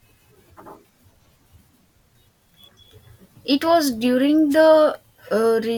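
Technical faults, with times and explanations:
4.50–4.56 s, wireless microphone noise hit: a brief static swish over the speech as the FM radio link fades and receiver noise rises for about 60 ms.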